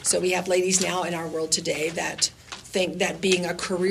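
From 2.85 s to the end, a train of clicks appears: about fifteen sharp pops at roughly 13.8 per second, unevenly spaced and peaking near the sound's own level, likely from electrical interference. Spectrograms show thin broadband vertical streaks; waveforms show narrow spikes.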